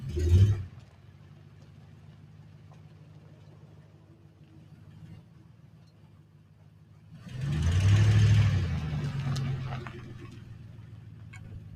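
From start to finish a noise suppressor applied to music or sounds is at work, treating sustained tones, ambience and decaying tails as noise. Onsets pass, but held sound sinks by roughly 15 dB, so it pumps and thins. The waveform shows envelopes collapsing after each attack, and the spectrogram shows tails and steady bands fading in patches.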